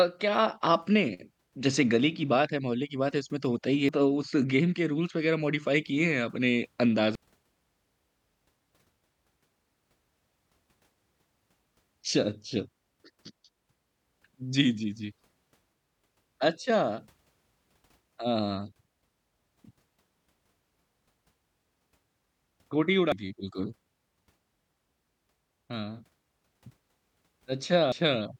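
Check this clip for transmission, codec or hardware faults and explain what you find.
There's one kind of fault here, damaged data in a compressed stream, turning up four times: 3.89–3.92 s, 7.15–7.18 s, 23.12–23.15 s and 27.92–27.95 s. Corrupted bytes made the decoder misread frames and lose sync, so each spot gives a brief glitch of about 30 ms, a chirp, squawk, click or short hole.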